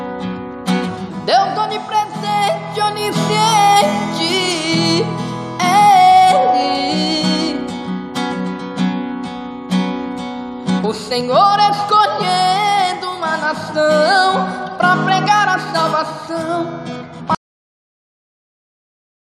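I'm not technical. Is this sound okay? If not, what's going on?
No. Cut-off end at 17.35 s: the final stretch of audio was never written, so the sound stops mid-way and drops abruptly into dead silence.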